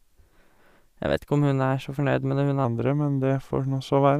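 At 2.65 s the speech suddenly drops into a section at the wrong speed, and it stays that way to the end. Playback runs at about 0.89 times the original rate, so everything slows and sinks together, roughly two semitones lower, with the voice sounding heavier and a bit drawn out. Because pitch and tempo move as one, it's likely that stretch was resampled or played against a mismatched clock.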